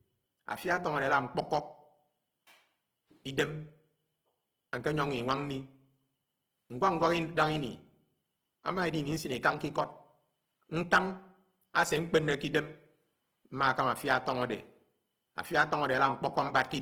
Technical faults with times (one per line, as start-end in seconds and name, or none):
0.00-16.81 Opus compression